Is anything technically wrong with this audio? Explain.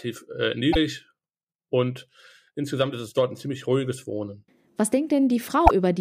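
Yes. At 0.72 to 0.76 s and 5.66 to 5.71 s the speech skips ahead with a brief glitch of about two frames' length. This is likely a broken MP3 bit reservoir: frames were lost, so following frames, each about 26 ms, decoded from the wrong borrowed data.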